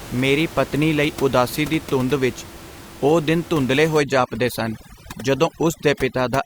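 A speech recording whose noise reduction was set far too strong from 4.00 s to the end at 6.45 s, just after "ਵਿਚ ਉਹ ਦਿਨ ਧੁੰਦਲੇ", giving overdone noise removal. The processor cuts any frequency band close to its noise estimate, so the room noise, about 17 dB below the speech beforehand, drops and breaks up into twinkling specks. Quieter parts of the voice are stripped along with it.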